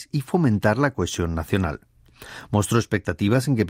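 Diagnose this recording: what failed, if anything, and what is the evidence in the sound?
Nothing failed in this recording, and there is no fault evidence in the sound.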